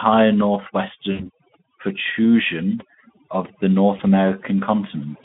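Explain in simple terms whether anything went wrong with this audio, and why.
Two things went wrong in this speech. First, overdone noise removal runs through the whole clip. A noise reduction tool was set too strong. It switched off quiet frequency bands along with the hiss. So the background drops and breaks up into twinkling specks.

Second, VoIP packet loss concealed by the speech codec happens twice. The first is from 1.11 to 1.27 s, just before "protrusion of the". The second is from 3.97 to 4.01 s, just after "protrusion of the". Pieces of the call never arrived, about 80 ms the first time and 20 ms the second. The decoder filled each gap by stretching the last sound it had, so you hear a short buzzy or smeared tone that fades. The voice stays weak for a moment afterwards. The phone-style Speex coding, with its narrow, muffled band, is working as designed.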